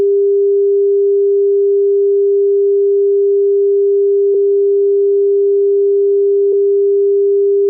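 At 4.33 s and again at 6.52 s, compressed frames are skipped. Each time the sound jumps ahead by roughly 70 ms, which fits about three 24 ms frames lost or rejected by the decoder.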